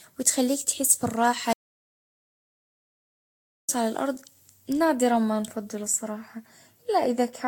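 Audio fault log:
throughout: generation loss. The speech has a swirly, hollow quality with smeared consonant attacks and a watery haze, worse than a single encode at this rate would produce. The likely cause is the audio being decoded and re-encoded about ten times, consistent with repeated Vorbis passes near 51 to 53 kbit/s. Each pass re-quantises on a shifted frame grid, so coding noise and spectral gaps compound. Nothing is present above 19.3 kHz.
1.53 to 3.69 s: audio dropout to silence. The speech cuts off abruptly at 1.53 s and returns mid-flow at 3.69 s, leaving about 2.16 s of silence with no room tone or noise floor underneath. That silence points to the recorder continuing to write empty samples while the input was missing. The likely cause is a lost input, such as a disconnected device, a dropped link or an accidental mute. Whatever was spoken in that span is not recoverable.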